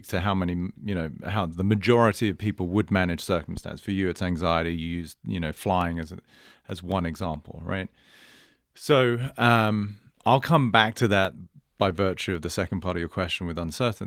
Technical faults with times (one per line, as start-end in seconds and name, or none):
3.57-3.64 phantom power thump
5.59-7.36 CD scratch ticks
11.03-12.57 CD scratch ticks